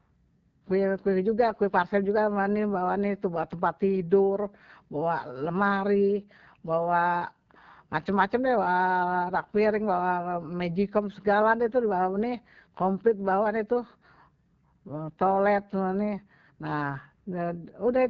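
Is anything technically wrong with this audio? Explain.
Yes. The whole clip carries AMR wideband (HD Voice) codec damage, and it is plainly audible. The speech sounds rough and raspy, typical of this codec's low rates, and points to about 8.85 kbit/s. Nothing remains above 6.9 kHz. The top band is synthetic noise rather than real detail.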